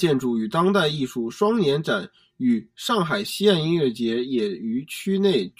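Channel delay (comb filtering) runs from start to finish. One channel arrives around 5 ms behind the other, and when the two are folded to mono, components shared by both cancel wherever they land half a cycle apart. That puts the first notch near 100 Hz, with further dips repeating up through the spectrum at regular spacing. The speech sounds hollow and phasey, with a colour that stays fixed throughout.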